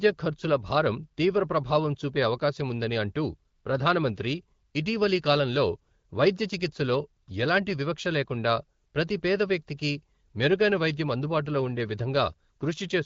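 Speech carried over an AMR wideband (HD Voice) link at 12.65 kbit/s, a rate at which that codec keeps speech clear, with only light coding effects and no technical faults to report.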